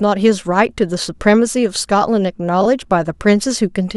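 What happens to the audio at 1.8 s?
At 1.8 s the speech carries straight through with no dropout, click, distortion or other fault.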